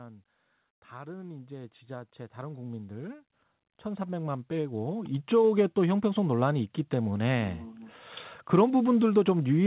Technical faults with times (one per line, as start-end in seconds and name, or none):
0.90-5.71 automatic gain rising